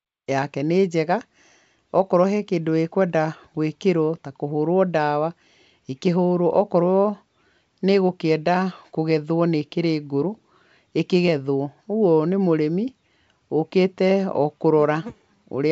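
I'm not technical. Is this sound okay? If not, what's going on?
Yes, nothing's wrong here; it just eases in gently in the very first moment, which is perfectly normal.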